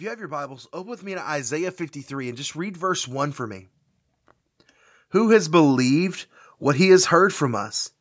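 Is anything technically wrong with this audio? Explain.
Yes. From 0.13 to 3.7 s the automatic gain is rising, climbing about 14 dB as the gain control decides the input is too quiet and keeps pushing it up. The speech and the room noise swell together, so the whole background lifts along with the voice. A smaller rise of about 4 dB follows between 5.11 and 6.67 s. The call's microphone processing trims the lowest bass, which is expected.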